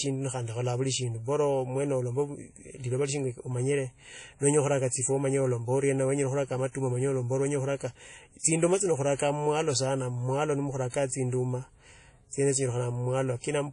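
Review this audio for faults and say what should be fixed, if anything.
The speech carries WMA compression artefacts from start to finish. The damage is plainly audible. Nothing is present above 10.1 kHz, so the top end sounds dull. Consonants ring and smear, and a washy hiss rises and falls with the signal. This is likely a transform codec working with long blocks, spreading quantisation noise across tens of milliseconds. The band limit and weak detail fit a low bitrate around 32 kbps. To prevent it, encode from the original source at a much higher bitrate or with a lossless format.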